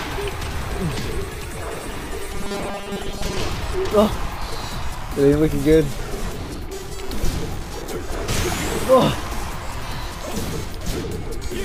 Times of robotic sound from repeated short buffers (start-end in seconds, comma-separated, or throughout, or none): 2.33-3.37